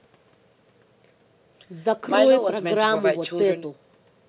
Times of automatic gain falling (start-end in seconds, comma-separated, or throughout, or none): none